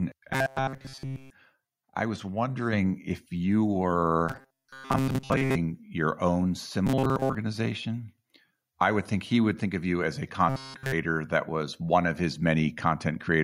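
Robotic sound from repeated short buffers appears first from 0.34 to 1.30 s. The speech turns into a rigid, metallic buzz at 133 Hz that still loosely tracks the speech. This likely comes from audio arriving too seldom, with the player looping its last fragment of about 7.5 ms. In this span the sound is essentially all repeated material.

The microphone volume stepped up at 2.73 s. Speech and background jump together by about 4 dB in one step, as the input level on the device was raised abruptly rather than eased in.

The same robotic buzz at 133 Hz returns from 4.29 to 5.56 s and from 6.87 to 7.35 s, with most of the sound in those spans replaced by repeats. It comes back from 10.49 to 10.92 s, where the sound is again almost entirely looped fragments.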